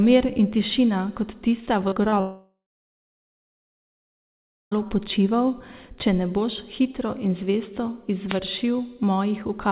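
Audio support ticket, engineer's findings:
Wireless mic noise hit, 1.62–1.67 s and again 8.27–8.40 s. Short burst of static, the second one longer. The analogue FM link faded as reflections cancelled, receiver noise came up. Looks like RF, not the network. Worth checking antenna placement and the receiver's squelch setting.

Short concealed packet loss, three blips: 1.88–1.94 s, 1.94–1.98 s (back to back with the first), then 2.10–2.14 s. Brief smear/wobble, each hole 20–40 ms. Jitter buffer didn't get those packets in time, so the decoder stretched the last sound across the gap and blended back.

Long network dropout, 2.20–4.73 s, about 2.5 s gone. The last sound gets carried on and fades, then roughly 2.2 s of dead air before the audio resumes with that chunk missing. Likely a network outage upstream of the jitter buffer rather than anything local. Bandwidth stops at 4 kHz, which fits G.711 mu-law at 64 kbps, so that part's expected.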